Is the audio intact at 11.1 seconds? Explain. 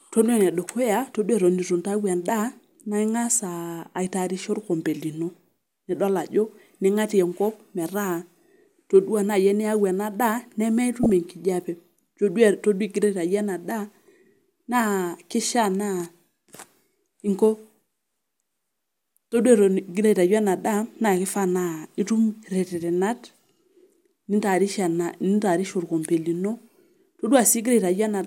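No, right after "ena daa" there's a corrupt frame decoded from 11.03 to 11.10 s: a few damaged frames played anyway, giving a loud, brief chirpy noise burst.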